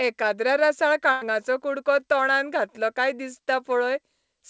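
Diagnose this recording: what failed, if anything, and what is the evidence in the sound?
A burst of packet loss hit at the network stage, from about 1.12 to 1.23 s, right before "कुडको तोंडांत घातलो काय". The receiver stretched the last sound for about 94 ms, fading it down, then resumed further on, so about 100 ms of audio is gone.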